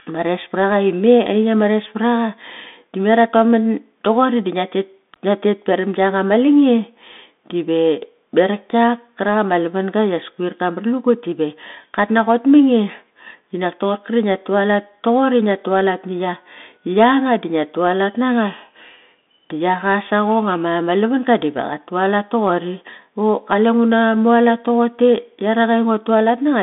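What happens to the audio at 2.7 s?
At 2.7 s the speech carries the Bluetooth CVSD headset codec, present for the whole clip. The band runs only from about 200 Hz to 3.6 kHz. Each sample is a single up-or-down step, which fits a 64 kbps link. Loud, bright sounds outrun that step and distort, s sounds turn scratchy, and a grainy hiss sits underneath.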